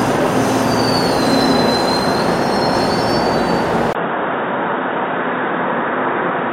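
At 3.93 s the sound drops out for about 20 ms, then returns duller and boxier, and a little quieter, by a few decibels. It stays that way to the end of the clip. The likely cause is an input switched to a poorer device in mid-recording. From that point nothing reaches above 3.8 kHz, and a faint new background noise sits well below the sound. On a spectrogram the upper band is cut off sharply after a brief vertical gap. The waveform shows a short flat gap, then smaller peaks.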